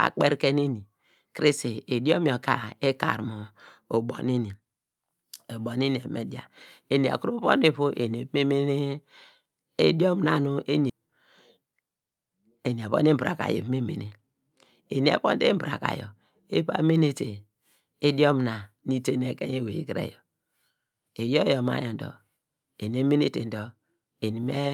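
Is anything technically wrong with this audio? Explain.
Yes, there are two faults in this speech clip.

Skip ahead, at 10.89 to 10.91 s: about a second of speech was discarded in transit or when the jitter buffer overflowed, while later audio was already queued. Playback jumps straight across the missing stretch with no filler, so the speech lurches forward abruptly.

Jitter buffer speed-up, from 12.74 to 14.82 s: the receiver held more audio than its target and trimmed delay by repeatedly cutting tiny pitch-period slices, about a fifth of a second in total. The speech runs roughly 9% faster at unchanged pitch and sounds hurried.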